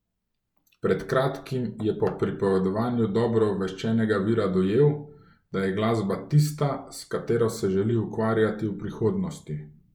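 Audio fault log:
Nothing stood out on listening to this speech recording.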